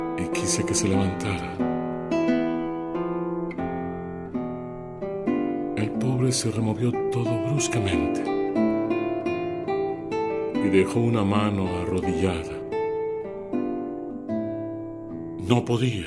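Nothing in the signal points to a technical fault at any point in the clip.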